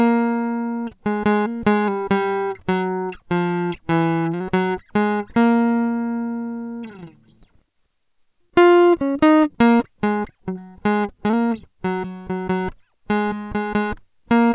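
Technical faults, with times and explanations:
No technical faults are present in this music clip. Nothing in it calls for a timestamp or an explanation.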